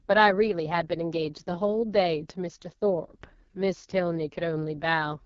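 AMR wideband (HD Voice) codec damage runs through the whole speech clip from start to finish. Everything above 7 kHz is missing. The vocal detail up to about 6.4 kHz has been rebuilt by a pulse-excited vocal tract model, and the top band has been filled with shaped noise. The damage is heavy. Speech comes across rough and raspy, with a buzzy, grainy edge, which fits the codec's lowest rate of about 6.6 kbit/s.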